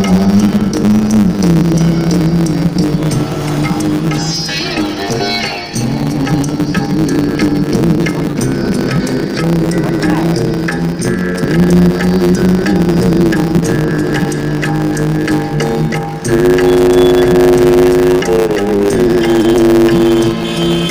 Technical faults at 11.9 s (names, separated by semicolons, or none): block size mismatch (truncated)